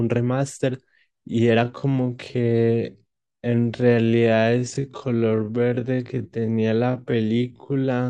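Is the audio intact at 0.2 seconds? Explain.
Yes, the audio is intact at 0.2 seconds, with no fault at that moment.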